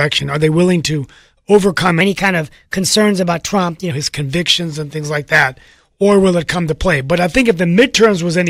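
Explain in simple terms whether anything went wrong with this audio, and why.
Between 2.01 and 3.91 s, the speech jumps up in pitch and rushes forward, then drops back to normal. This is a section at the wrong speed. That stretch plays 1.12 times faster than it was recorded, which lifts the pitch by about two semitones, since speed and pitch move together. The likely cause is that this portion was played or edited against the wrong clock rate.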